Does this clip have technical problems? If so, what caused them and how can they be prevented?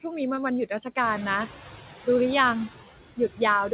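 Yes. Noise suppressor artifacts run throughout: the suppressor lowers steady noise about 9 dB frame by frame, leaving a residue that rises under speech, unlike a constant codec hiss. A gentler suppression setting would prevent it.

Short concealed packet loss at 0.36 to 0.39 s: about 20 ms failed to arrive, and roughly 12 ms was filled by extending the preceding sound, giving a brief smear rather than a hard dropout of silence. A larger jitter buffer or a more stable network would prevent it.

Noise suppressor catching up from 1.03 to 1.48 s: when the room noise jumps about 12 dB near 1 s, it passes through under-reduced, then sinks about 8 dB over 450 ms as the estimate adapts, a gradual fade rather than the frame-by-frame flutter. Faster noise tracking would prevent it.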